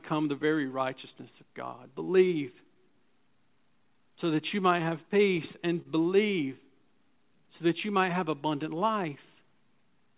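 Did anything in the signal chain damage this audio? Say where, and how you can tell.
Yes. The damage sits at the receiving end of the call, in the jitter buffer. The sound passed through a G.711 mu-law path with nothing above 4 kHz. The sender's audio clock runs slow, by around 2 percent. Because of this clock drift between sender and receiver, the buffer keeps draining, and the receiver has to keep padding the stream. You can hear it as a faint, recurring unsteadiness in pacing across the whole clip.

The repeated timing corrections run from 0.67 s to 10.13 s. Playback sits at about 98 percent speed, and about 0.15 s is added in total. Each insertion duplicates a short piece of the waveform. On a waveform view, the corrections show up as repeated cycles at irregular gaps. On a spectrogram, harmonics are briefly smeared or extended, always lengthening and never shortening.

There is one short stall from a late packet at 5.82 to 5.87 s. 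A packet missed its slot, the buffer ran empty, and the receiver stretched the last sound by 29 ms until the data arrived. Nothing is lost, but playout delay rises by 29 ms. On a spectrogram this appears as a frozen, flat band of energy. The waveform shows a held periodic stretch, sometimes with a slight level dip.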